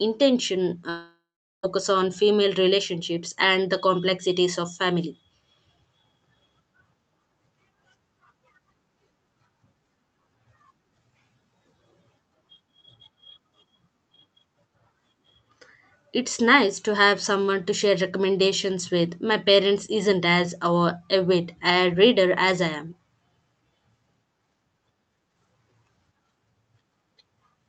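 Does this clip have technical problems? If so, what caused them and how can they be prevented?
Yes. From 0.89 to 1.65 s the sound smears into a fading buzz, then about 0.41 s of near-silence, and returns at "on female relationships and" with roughly 0.74 s missing. This is likely a long network dropout, with the receiver's concealment bridging lost packets. Prevent it with a stable wired connection, forward error correction, and enough network headroom.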